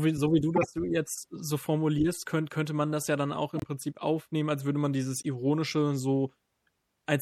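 From start to finish the speech has a dull, watery quality: the treble stops abruptly at a fixed ceiling, sibilants turn swirly and metallic, and consonant attacks smear. This is likely MP3 compression at a low bitrate, consistent with around 64 kbps. The encoder ran short of bits, cut the top band and dropped weak spectral lines that flicker on and off between frames.

Three short bursts come from a corrupt frame being decoded. The first runs from 0.56 to 0.66 s, between "wie so wie du" and "jetzt so formulierst könn". It spans a handful of frames and peaks at about -15 dBFS. The second, at 3.55 to 3.64 s after "das ja dann auch", and the third, at 5.15 to 5.25 s after "aufnehmen als würde man", peak at about -20 dBFS. Flipped bits gave the decoder wrong gains or codes, so energy landed at the wrong frequencies and each burst is heard as a brief chirp, squeak, blip or burst of noise.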